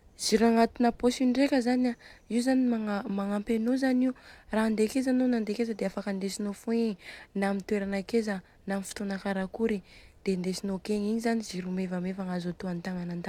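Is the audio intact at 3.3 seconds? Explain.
Yes, at 3.3 seconds the speech plays through intact, with no dropout, click, distortion or other fault at that moment.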